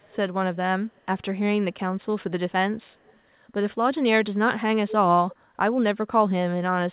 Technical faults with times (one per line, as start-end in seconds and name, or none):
0.00-0.16 echo leak
0.90-1.22 echo leak
2.82-3.19 echo leak
5.31-5.35 echo leak